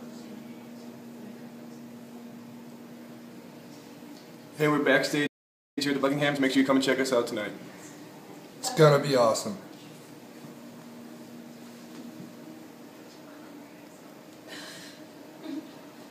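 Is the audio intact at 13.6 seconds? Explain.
Yes, the audio is intact at 13.6 seconds, with no dropout, click, distortion or other fault at that point.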